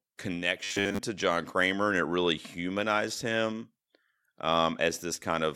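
From 0.64 to 0.99 s the speech goes robotic, the classic robotic sound from repeated short buffers. It's likely that fresh audio wasn't arriving fast enough, so the playback kept looping the last tiny chunk instead of moving on, and most of that stretch is repeats rather than real material. The loop imposes a steady 100 Hz buzz, which points to a chunk of about 10 ms, giving a stiff, metallic drone that only loosely tracks the words.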